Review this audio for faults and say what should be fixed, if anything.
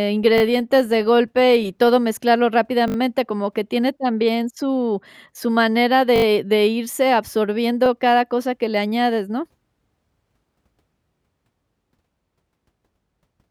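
Repeated buffer at 0.38–0.42 s, 2.88–2.96 s, 6.16–6.24 s and 7.86–7.88 s. Each stutter repeats a piece fitting a 20 ms buffer, one to four extra times, when new audio arrived late. Prevent it with larger playback buffering or higher-priority audio scheduling.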